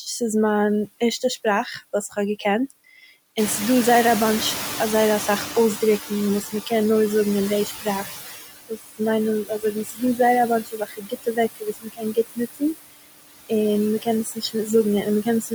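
Noise suppressor artifacts run the whole way through. The suppressor pulls steady noise down by about 16 dB frame by frame. From 2.1 to 2.71 s, right after "מיין ערשטע שפראך וואס", there's speech cut by the noise suppressor, with bits of speech mistaken for noise and dipped up to about 10 dB. When the room noise jumps about 16 dB around 3.5 s, the noise suppressor is catching up from 3.37 to 8.14 s. Its estimate lags, so the louder noise leaks through before sinking by about 12 dB over 4.77 s. The same speech cutting returns at 6.42, 7.66, 8.69, 9.45, 10.63, 14.02 and 15.23 s, dips of about 8 to 21 dB. It's worst from 10.63 to 12.62 s, where stretches sound swallowed.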